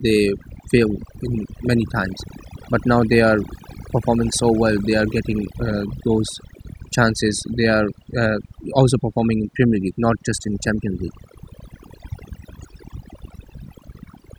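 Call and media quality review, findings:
Overdone noise removal, throughout. Noise suppressor set too aggressive: bands near the noise estimate gated out, taking quiet speech detail with them. Background near-silent with twinkling specks.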